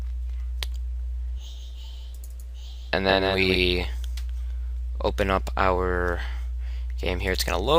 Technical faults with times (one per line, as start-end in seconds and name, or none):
1.38-3.56 doubled audio track